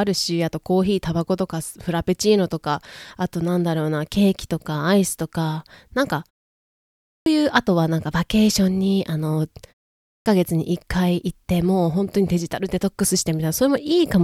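At 7.03 s, after a pause of about 0.81 s, the speech comes back with a clipped start after a pause. Roughly 0.23 s of the onset is missing through 7.26 s, so the first sounds are cut off and the speech jumps in abruptly from silence. The same happens at 10.03 s after a shorter 0.38 s pause, with about 0.23 s lost up to 10.26 s. The output device is going idle during silence and needs that time to wake before it plays again.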